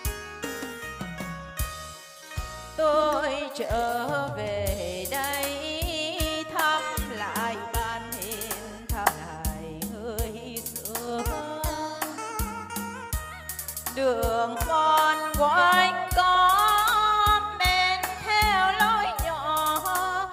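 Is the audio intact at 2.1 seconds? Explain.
Yes, the audio is intact at 2.1 seconds, with no dropout, click, distortion or other fault at that moment.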